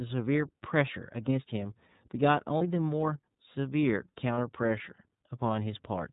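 From start to finish the speech runs through the iLBC codec. Nothing above 4 kHz survives, so the sound is narrowband and telephone-like. The codec damage is plainly audible: the voice is a little rough and has a slightly synthetic edge. Each frame's excitation is coded on its own, and the sound fits the 13.33 kbps mode with 30 ms frames. Detail lost in coding is never recovered.

At 2.58 to 2.62 s there are lost iLBC frames. The gap matches a single missing frame of about 30 ms. The decoder fills it by repeating the last pitch cycle with added noise. It sounds like a brief held, faintly buzzy vowel. The same happens at 4.34 to 4.38 s, again about 30 ms long. Each time the voice snaps back almost at once, because the next frame decodes independently.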